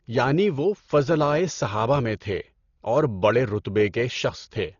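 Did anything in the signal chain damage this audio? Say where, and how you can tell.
Yes, at the codec stage: the speech is dull throughout, with nothing above 7 kHz and rough, fluttering noise around voiced tones, likely heavy Dolby Digital compression at a bitrate near 32 kbps filling starved bands with dither noise.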